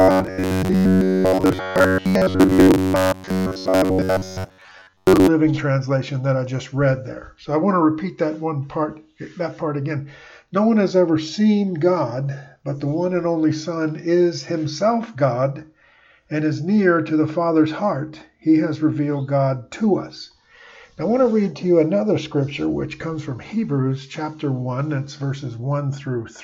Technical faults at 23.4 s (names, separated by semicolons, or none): none